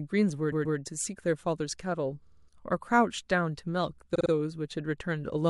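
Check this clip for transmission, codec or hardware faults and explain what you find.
The speech stutters three times, each a case of repeated frames. From 0.51 to 0.77 s, a block of about 130 ms plays twice more, which fits a short run of compressed frames being duplicated. From 2.26 to 2.47 s, a 52 ms block plays four extra times, and from 4.14 to 4.30 s, the same-length block plays three extra times. These add about 261, 209 and 157 ms. Unlike a dropout or a smooth concealment loop, the exact same fragment returns intact and the timeline grows.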